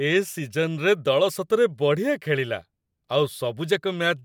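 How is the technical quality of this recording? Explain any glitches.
No glitches or technical faults can be heard anywhere.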